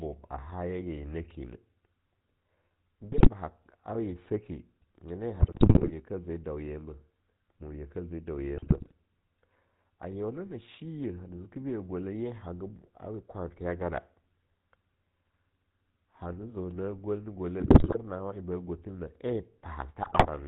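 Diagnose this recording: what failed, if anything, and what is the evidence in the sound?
The codec stage shows GSM full-rate codec damage across the whole clip. The speech has a buzzy, gravelly roughness, consistent with 13 kbps GSM full rate. On a spectrogram, energy stops hard at 4 kHz, and the harmonics look coarse and pulse-driven from the sparse regular-pulse excitation.

GSM bit errors from the radio link corrupt the decoder's filter, pitch and gain values at 3.12–3.30 s, 5.40–5.93 s after "nyena ye", 8.57–8.92 s, 17.60–17.97 s between "gwel na" and "nawa en", and 20.02–20.28 s. Each burst squawks, pops and gargles, showing as waveform level spikes or warped, smeared spectral bands.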